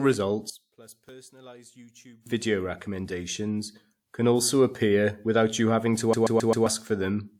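From 0.50 to 2.26 s the speech drops by about 23 dB, leaving only a residue; likely one channel inverted, so shared content cancelled when summed to mono. From 6.13 to 6.66 s, a 132.5 ms slice repeats four times with a brief mute at each jump: a CD stuck on one turn, the laser skipping back.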